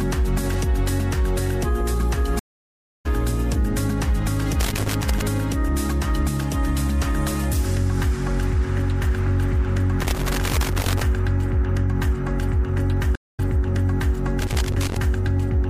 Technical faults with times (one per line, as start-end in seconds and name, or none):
2.39-3.06 stream reconnect
4.60-5.22 loose connector crackle
10.00-11.03 loose connector crackle
13.15-13.40 stream reconnect
14.41-14.97 loose connector crackle